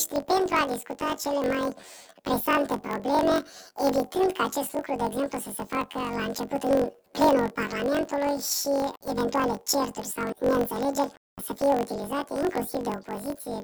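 Throughout, the audio shows planar audio read as interleaved. Each 21.33 ms block, consistent with a 1024-sample buffer, plays left then right at double speed, so it sounds an octave high with a 46.9 Hz flutter. A spectrogram shows harmonics doubled, with vertical seams every 21.33 ms.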